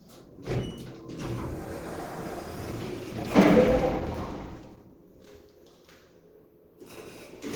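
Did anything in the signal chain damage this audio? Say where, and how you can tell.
Yes. The damage is at the codec stage, and it runs through the whole clip, so it is likely Opus compression at a low rate. Bandwidth is kept, with content reaching about 20.1 kHz, but tonal parts come out grainy, rough and noisy where bands have been refilled with folded or synthetic energy. The hoarse, muffled texture points to hybrid mode, which fits a bitrate around 16 kbps.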